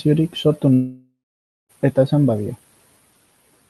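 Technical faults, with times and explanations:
0.73 to 1.71 s, long network dropout. The speech cuts out for nearly a second. At first the last sound carries on as a buzzy, smeared tone that fades away. About the final half second is silence. The speech then resumes, with that stretch simply missing. This is likely a gap in the incoming audio on the call path. The receiver fills the gap with made-up sound, then stops once the gap runs too long.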